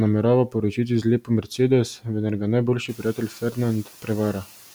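Parts of the speech sound swallowed and faint from 0.76 to 1.59 s, 2.88 to 3.59 s and 3.83 to 4.09 s, dipping by about 11 to 12 dB. This is speech cut by the noise suppressor: it mistook brief stretches of speech for noise and turned them down. Separately, the room noise rises by about 15 dB around 3 s.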